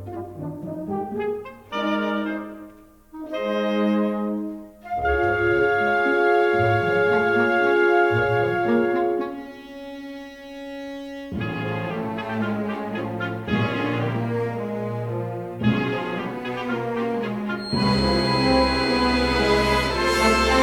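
From 17.54 s to the end at 20.62 s, a feedback whistle sits behind the sound. It is a thin, steady tone at 4.2 kHz. It stays well below the main sound and does not grow. Its level swells and fades slowly. The likely cause is a loudspeaker feeding back into the microphone, with the loop gain held just at the edge of feedback. That lets one high frequency ring on without running away into a howl.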